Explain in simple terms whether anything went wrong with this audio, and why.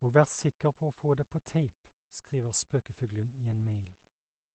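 Two things went wrong in this speech clip.

The first runs through the whole recording: low bit depth without dither. The speech is stored with too few volume steps, likely because it was rounded to about 8 bits with no added noise to smooth the rounding. The rounding errors follow the speech itself, so the quieter parts sound grainy and rough. The faintest moments either drop to silence or crackle as they jump between two neighbouring steps.

The second is a lost packet rebuilt from error correction, from 3.51 to 3.65 s. Several small chunks of audio went missing in transit. The call software had backup copies carried in the chunks that followed, and it played those instead, so there is no silent gap. Those copies are lower quality, though, so for that short stretch the speech sounds rougher and noisier than the audio on either side of it.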